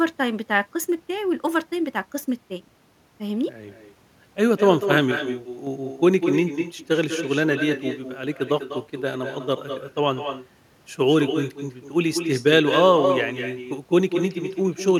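From the start, the speech carries an echo with no canceller: a quieter, thinner copy trails every phrase by about a fifth of a second, sitting about 8 dB down. It's the far end's loudspeaker feeding back into their microphone, with nothing there to subtract it.

Then from 7.93 to 8.23 s the level abruptly sags by about 6 dB before snapping back. That sudden dip likely comes from one channel dropping out, with the remaining channel carrying the mono sum on its own.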